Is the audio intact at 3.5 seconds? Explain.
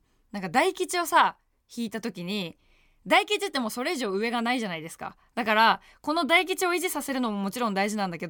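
Yes, the audio is intact at 3.5 seconds, with no audible fault at that point in the speech.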